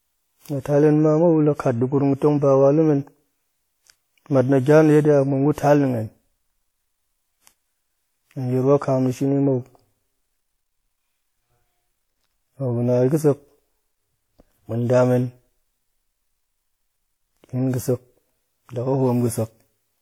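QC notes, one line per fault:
Throughout: generation loss. The speech sounds swirly, hollow and smeared, with blurred consonant attacks, despite content reaching about 20.1 kHz. The likely cause is around ten successive lossy re-encodes, consistent with WMA near 96 kbit/s, each adding fresh quantisation noise.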